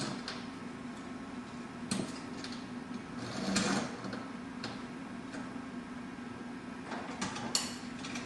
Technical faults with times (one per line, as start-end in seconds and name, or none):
none